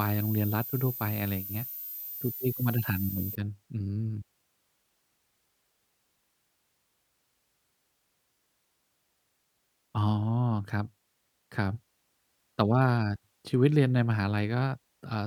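From 0.0 to 3.35 s, a switching supply whistle sits roughly 10 dB below the speech as a thin, shrill tone wandering between 13.5 and 14.2 kHz, from a power supply cycling audibly. A spectrogram shows a wavering horizontal line there, then nothing.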